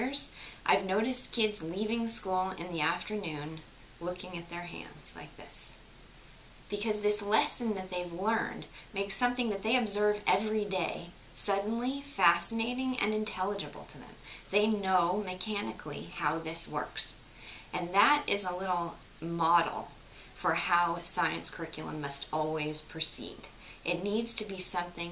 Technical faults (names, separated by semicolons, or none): none